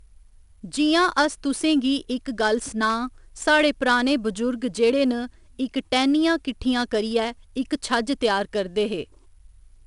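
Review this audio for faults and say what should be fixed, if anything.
4-bit ADPCM compression throughout the speech: each sample is coded as a coarse adaptive step, adding level-following gritty hiss, with nothing above 10.6 kHz, which fits a 22 kHz rate. Re-export from the original recording as uncompressed PCM at a higher sample rate.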